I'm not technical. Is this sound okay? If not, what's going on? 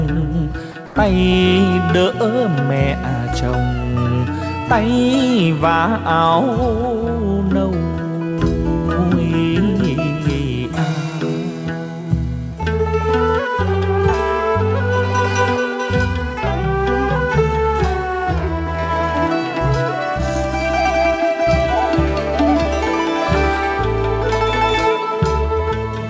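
No. Sound dropped by the voice detector, from 0.72 to 0.74 s: for about 20 ms the audio gives way to a steady hiss, and roughly 10 ms of real sound goes missing. The likely cause is that the sending side's voice detector mistook a quiet moment for background, stopped transmitting, and the receiving side filled the gap with stand-in noise until the detector picked the sound back up.

Comfort noise in place of the background, from 0.86 to 0.96 s: for a tenth of a second the real background is swapped for a smooth, featureless noise that is slightly quieter than what surrounds it. This likely happens because the sender paused transmission during what it judged to be silence, and the receiver generated artificial noise roughly matching the background to avoid dead air. All of this passes through a call link that removes everything above 8 kHz, so the top end sounds dull.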